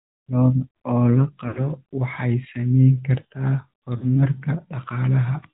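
Throughout the speech the AMR narrowband mobile codec limits the band to below 4 kHz, and it adds a buzzy, synthetic edge because the voice is rebuilt from a vocal-tract model and a few pulses per frame. The coding damage is plainly audible and fits a mid-rate mode around 10 kbps. A simple low-pass filter would only sound muffled. The artificial, reconstructed grain is what identifies a codec.

From 1.48 to 1.68 s there are lost AMR speech frames. The decoder keeps repeating the last good pitch and vocal-tract settings at falling gain, so the sound stretches and sinks toward silence instead of cutting off. This fits about 80 ms of missing audio, or four 20 ms frames. A shorter loss follows from 3.98 to 4.17 s, consistent with two frames. It is likewise drawn out and fading, and the voice returns rough for a moment.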